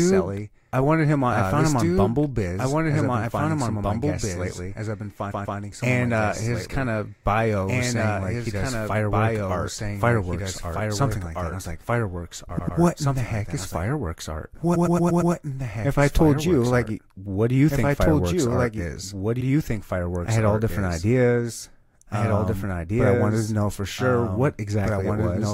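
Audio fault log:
throughout, doubled audio track: a full-band copy about 5 dB quieter trails about two seconds behind, likely from a second, slower capture path; the spectrogram shows every pattern repeated fainter, undecayed.
5.30 to 5.58 s after "of my guests lately", 12.58 to 12.77 s before "what in the heck", 14.74 to 15.32 s after "heck is fireworks art", repeated frames: short blocks of 139, 89 and 116 ms replay two, two and five extra times. The result is a stutter of identical waveform segments.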